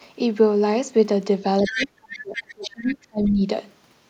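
At 1.58 to 1.87 s the echo canceller likely left part of the loudspeaker signal in the microphone path. The other side's voice leaking through sits only a few decibels under the talker. Shorter, fainter scraps return at 2.12 to 2.19, 2.35 to 2.52, 2.88 to 2.94 and 3.26 to 3.30 s.

From 1.63 to 3.42 s both sides talk at once, and the canceller likely cannot tell the talker from the echo, so it turns both down. This speech suppressed in double talk makes the voice sink by up to about 35 dB.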